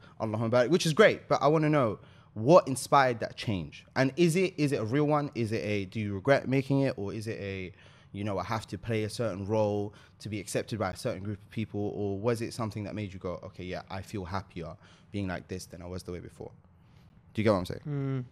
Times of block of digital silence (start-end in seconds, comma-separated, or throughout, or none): 10.92, 17.09